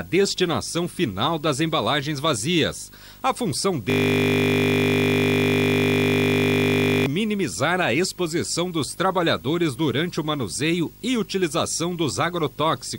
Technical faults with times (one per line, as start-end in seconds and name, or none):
0.00-12.99 video or display buzz
3.90-7.06 system hang loop